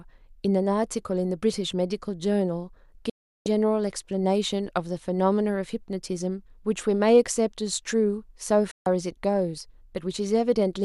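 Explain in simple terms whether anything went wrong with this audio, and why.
Twice the receiver lost the incoming digital signal, a digital broadcast dropout, and muted itself until it could decode good frames again. In this speech, the sound snaps to silence with only a very quick fade, first from 3.10 to 3.46 s (about a third of a second) and again from 8.71 to 8.86 s (about 0.14 s). Whatever was spoken in those gaps is simply gone; the programme picks up later, not where it stopped.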